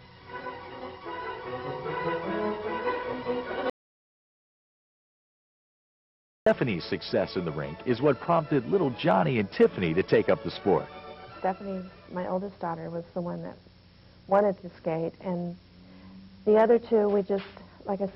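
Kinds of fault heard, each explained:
Audio dropout to silence: The input was likely lost for a moment, perhaps through a failed link or a stray mute, while recording carried on writing zeros. From 3.70 to 6.46 s the sound cuts out abruptly. About 2.77 s become total silence, with no room tone.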